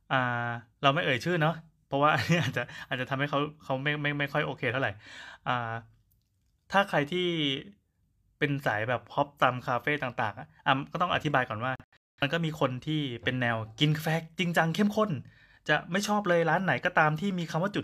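Speech with a digital broadcast dropout from 11.76 to 12.23 s: the receiver muted on failed frames, leaving short silent holes over about 430 ms, the longest 213 ms. Unlike analogue fading, the gaps are clean silence, not hiss, and the missing audio never returns.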